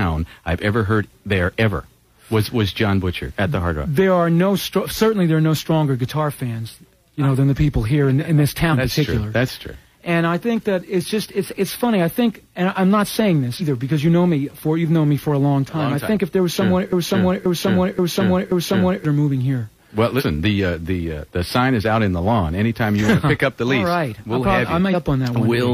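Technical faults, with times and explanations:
8.69–8.75, 13.56–13.62, 20.16–20.22 and 24.90–24.95 s, compressed frames skipped: each time the audio jumps forward, by roughly a tenth of a second at 8.69 and 20.16 s, a bit more at 13.56 s and nearly a third of a second at 24.90 s. The step sizes suggest whole frames of about 46 ms going missing or being rejected.
16.93–19.05 s, broken-record loop: a 530 ms fragment plays four times back to back, so the sound stutters in place for about two seconds and whatever should have come next never arrives. The likely cause is a stalled player or stream that kept resending the last chunk it held.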